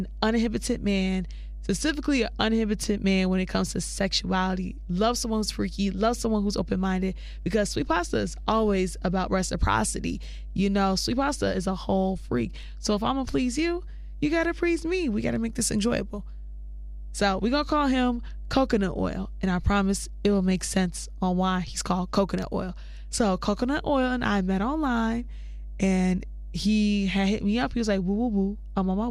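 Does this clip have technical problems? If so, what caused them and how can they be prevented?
Yes, mains hum runs throughout the speech: a steady 50 Hz tone, roughly 10 dB below the speech, from a ground loop or nearby transformer coupling the power line into the signal. A spectrogram shows an unbroken horizontal line at 50 Hz with some low harmonics, and the waveform carries a constant slow ripple. Prevent it by using balanced cabling, a single common ground point, and keeping audio lines away from power supplies.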